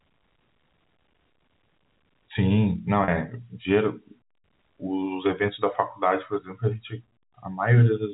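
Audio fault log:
3.04 to 3.08 s, packet loss with pitch repetition: 40 ms of audio drops out, which fits two lost 20 ms packets. The receiver bridges the gap by looping the last pitch period. The sound briefly holds on a slightly buzzy, frozen tone, then resumes.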